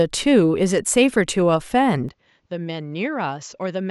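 At 2.09 s the speech abruptly turns duller and quieter, dropping about 10 dB, with no gap, and stays so to the end, likely an input switched to a poorer device. A spectrogram shows everything above 7.6 kHz cut off and a faint new noise floor; the waveform steps down.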